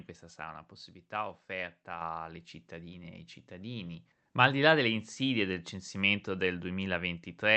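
Microphone volume stepped up at 2.01 s: the input gain jumps by about 5 dB in one step, so the speech and background both become louder together, heard through an Opus call path cut off near 8 kHz.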